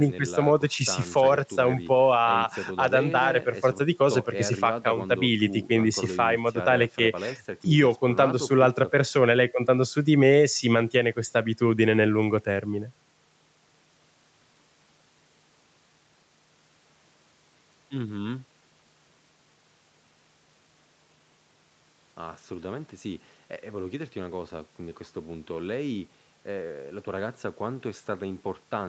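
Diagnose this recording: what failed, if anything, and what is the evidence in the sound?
Nothing failed: the speech carries only the expected call-path character, the lowest bass trimmed by the microphone processing's high-pass filter and nothing above 8 kHz, which fits an Opus link at around 48 kbps with its coding noise, and no stage from capture through playback leaves a defect in the sound.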